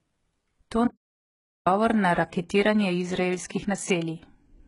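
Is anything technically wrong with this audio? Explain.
Yes, there are two faults.

Throughout the speech, the treble has a gritty, metallic quality, and s sounds are lispy. The likely cause is heavy HE-AAC compression at a bitrate of about 12 kbps. That codec rebuilds upper bands by copying lower ones, so harmonics misalign. A spectrogram shows smeared, repeated patterns and nothing above 11.1 kHz.

From 0.87 to 1.67 s, the audio cuts to complete silence for about 0.79 s, with no room tone. The likely cause is an audio dropout to silence, where input was lost while recording continued. The waveform shows a flat line there, and the spectrogram shows a blank band.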